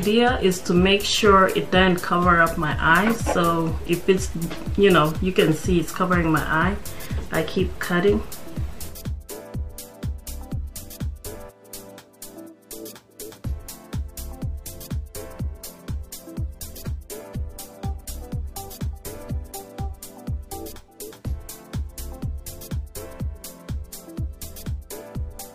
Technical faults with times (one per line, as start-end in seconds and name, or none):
15.59-19.59 adaptive stream at a lower bitrate